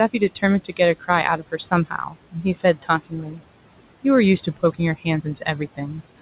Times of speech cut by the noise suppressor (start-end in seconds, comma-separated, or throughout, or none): 0.65-0.80, 1.37-3.42, 5.22-5.47